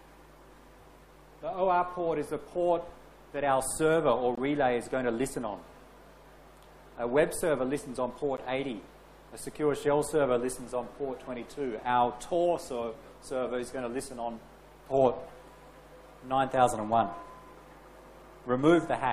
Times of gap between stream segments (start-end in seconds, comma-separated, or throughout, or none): 4.35-4.38, 8.37